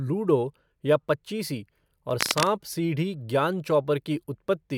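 Just after "या पचीसी", from 2.1 to 2.5 s, a dense, uneven scratching rustles over the speech, sitting only a few decibels below it. This is cable scratch noise, likely from a worn cable or connector being moved so its contact resistance jumped about rapidly.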